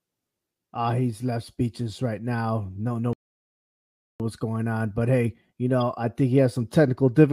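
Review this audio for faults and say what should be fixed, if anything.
The speech cuts out at 3.13 s and stays silent until 4.20 s, a gap of about 1.07 s, before resuming with "what's going on but". This is a playback stall: the output had nothing to play for that interval, most likely because the player's buffer ran dry or its audio thread was blocked, and sound returned only once data reached the output again. To prevent it, give the playback buffer more headroom and keep the audio thread free of blocking work.

A short corrupt glitch occurs at 5.81 s, just after "on but hey you" and before "I think he has". This is a corrupt frame decoded: damaged bits in the compressed stream were accepted by the decoder, which then placed energy at the wrong frequencies for about a couple of frames. The result is a brief artifact that does not belong to the speech. To prevent it, add integrity checks on the transport so damaged frames are concealed or dropped rather than decoded.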